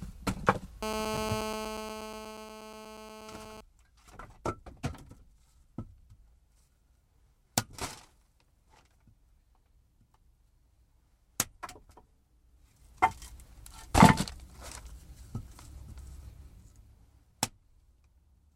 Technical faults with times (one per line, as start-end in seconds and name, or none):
0.83-3.61 GSM phone buzz